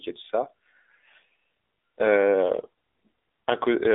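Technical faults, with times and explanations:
throughout AMR narrowband mobile codec: the voice sounds thin, boxed-in and plainly buzzy, with a synthetic edge on every syllable. It sits in a telephone band of 300 Hz to 3.6 kHz, and nothing above 3.7 kHz comes through. The codec rebuilds speech from a vocal-tract model driven by a handful of pulses in each 5 ms slice. At this low rate, which fits the 7.4 kbps mode, too few pulses survive to carry natural texture.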